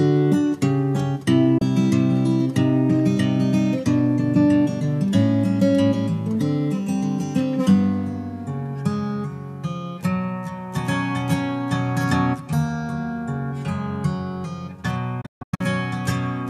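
A brief hole at 1.58 to 1.62 s, then a cluster of short silences from 15.21 to 15.61 s (longest 144 ms), each snapping off with an 8 ms fade: a digital broadcast dropout, where the receiver muted on lost or corrupted frames.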